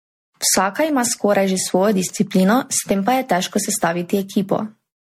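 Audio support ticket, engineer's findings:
Generation loss throughout: swirly, hollow speech, blurred attacks, nothing above 16.5 kHz. Likely repeated MP3 re-encodes. Worse than a single pass at 60 kbit/s would leave.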